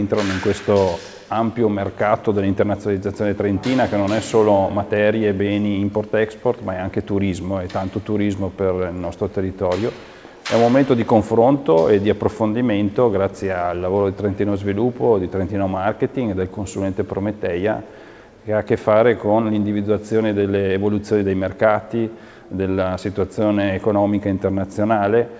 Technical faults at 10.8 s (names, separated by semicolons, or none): none